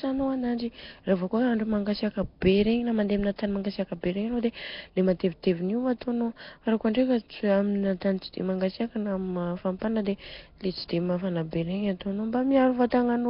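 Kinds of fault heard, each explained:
Nellymoser compression: The whole speech track carries a rough, hissy halo and a smeared, underwater quality, with heavy damage and nothing above 5.3 kHz. This is likely the old Flash microphone codec. It codes short blocks at a fixed, very low bit budget, consistent with about 22 kbps here, and fills starved bands with noise. That substituted noise makes the grit sound woven into the voice. Plain lowpass filtering would only dull the sound.
Pre-echo: At 12.90 s a brief hiss runs ahead of a sharp attack by about 18 ms, and the onset itself sounds softened. The codec spreads its quantisation noise across a whole transform block, so noise sized for the loud onset also fills the quiet instant before it. Because the hiss comes before the attack, not after it, it differs from a click, which is a single instant, and from reverb or echo, which trail the sound.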